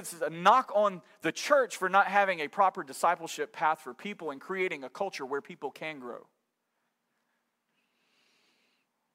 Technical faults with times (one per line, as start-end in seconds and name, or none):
none